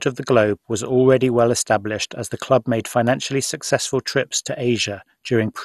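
Throughout, the speech sounds dull and gurgling, with nothing above 12.2 kHz: likely MP2 compression at a low rate, around 64 kbps, coarsely quantising sub-bands and dropping upper ones.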